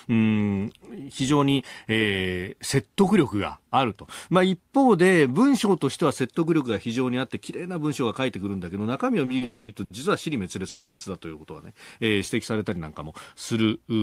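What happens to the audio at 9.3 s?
Two short stalls from a late packet, at 9.25–9.29 s and 9.37–9.43 s: the buffer ran dry, so the sound is held for 20 ms, then 40 ms, with a slight buzz or dip, showing as flat, repeated spectrogram bands.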